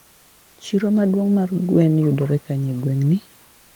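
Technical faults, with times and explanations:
0.00–0.57 s and 3.45–3.76 s, comfort noise in place of the background: room noise becomes steady, featureless hiss, about 1–2 dB quieter, likely Opus DTX synthesising noise during pauses.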